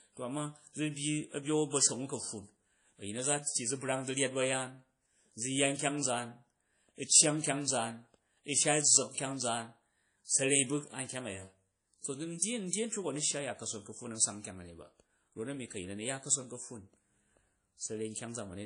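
Throughout the speech, the sound is plainly washy and ringing, with hiss that breathes with the signal. Nothing remains above 10.1 kHz. This points to likely WMA compression at a low bitrate, near 32 kbps. Long transform blocks smear quantisation noise, and weak detail is zeroed.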